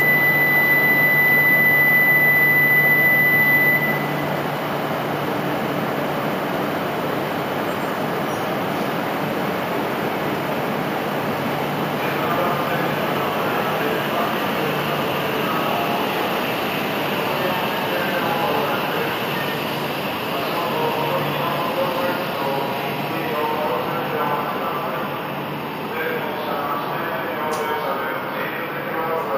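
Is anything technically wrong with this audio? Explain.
Yes. Throughout, imaging from sample-and-hold upsampling: each sample was repeated without smoothing, likely from 16 kHz to 48 kHz, leaving mirrored spectra from 8 kHz upward, about 16 dB down, heard as metallic fizz tracking the sound.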